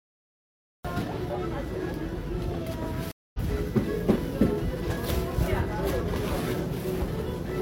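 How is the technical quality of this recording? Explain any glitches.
The recording has two clear glitches, one at the start and one early in the middle.

The first is a cut-off start. From 0 to 0.85 s there is digital silence, and at 0.85 s the sound begins abruptly mid-event, with no natural attack or fade-in. The capture or stream began late and caught the sound already in progress.

The second is a stream reconnect between 3.12 and 3.39 s. The audio drops to silence for about 0.22 s and then resumes at a point roughly 0.15 s further along. The connection broke, the player went quiet, reconnected and restarted its decoder mid-stream, so a short stretch of sound is skipped.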